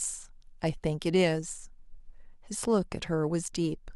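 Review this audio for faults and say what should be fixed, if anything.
Nothing stood out on listening to this speech recording, so there is nothing here that needs fixing.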